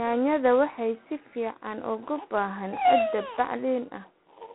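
Throughout, G.726 ADPCM coding with too few bits, which fits 24 kbit/s, adds a rasping hiss that follows the speech level, and nothing passes above 3.9 kHz.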